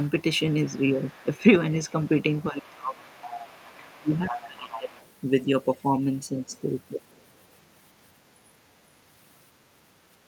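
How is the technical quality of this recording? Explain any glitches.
The recording has two linked echo-control faults, concentrated in the first five seconds.

Other side's voice leaking through appears at 0.04–1.38 s, 1.86–2.09 s, 2.41–5.11 s and 7.11–7.23 s. It is likely a loudspeaker echo that the canceller failed to remove. It is faint, roughly 15 to 35 dB below the speech, and strongest from 2.41 s.

Speech suppressed in double talk appears at 1.27–1.45 s, 2.50–3.01 s and 3.74–4.91 s. The canceller likely confused the talker with the echo and turned both down, so the voice dips by roughly 10 to 20 dB.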